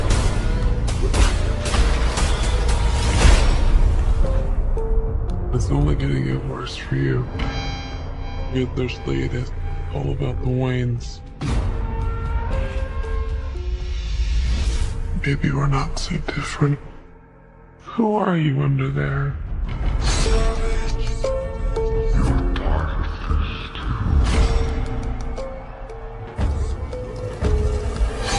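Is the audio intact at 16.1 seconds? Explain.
No, 16.1 s sits inside a wrong sample rate fault that runs through the whole clip. Everything plays at about 0.73 times its proper speed and roughly 5.5 semitones low, which fits 44.1 kHz material being played back at 32 kHz, so it sounds slowed and dragged down.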